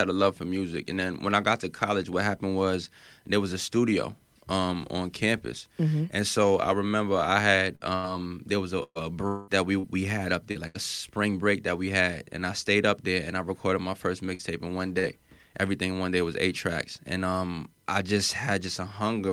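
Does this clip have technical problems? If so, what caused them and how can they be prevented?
Yes. From 7.75 to 10.78 s, between "so I remember I" and "spring break that we", there's repeated packet loss (robotic sound). Six gaps, the longest 120 ms, about 0.4 s in all, each patched by stretching the last sound, so the speech turns choppy. A bigger jitter buffer and a steadier connection would prevent it.

Inside that stretch, from 9.27 to 9.50 s, about 0.2 s of audio is gone and replaced by a continued, fading buzz rather than silence. The speech then resumes with that piece missing. This is most likely a long network dropout. A more stable link, wired rather than Wi-Fi, would help.

There are also two short concealed packet losses. One runs from 14.35 to 14.42 s, after "I recorded my first", and the other from 14.99 to 15.06 s, after "in one". Each is roughly 40 ms of audio filled in by extending the preceding sound, which leaves a brief smear. 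Forward error correction would cover gaps this small.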